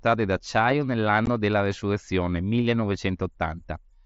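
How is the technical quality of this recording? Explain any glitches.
One brief dropout affects the speech, which passes through a wideband mSBC Bluetooth headset link with content up to 8 kHz. At about 1.26 s, unconcealed Bluetooth headset packet loss replaces 15 ms with silence or an idle pattern, which fits two lost voice packets. The hole has abrupt edges. The waveform and spectrogram show a thin vertical break.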